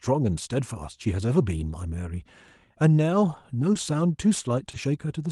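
Speech run through a call codec, with two spots of short concealed packet loss at 3.73–3.77 s and 4.71–4.75 s, where about 20 ms went missing and the receiver patched it, leaving a brief smear.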